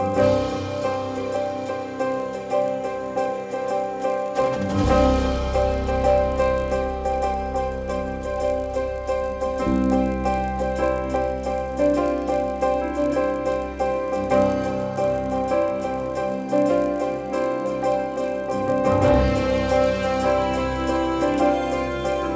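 A steady buzz at 50 Hz rides on the sound from start to finish, rising and falling with the signal and vanishing in the gaps. It comes from the resampler restarting on every block: the conversion from 44.1 kHz to 16 kHz was run on each 20 ms block in isolation, so the filter at each block edge worked from missing or wrong neighbouring samples. The small error left at every edge repeats fifty times a second.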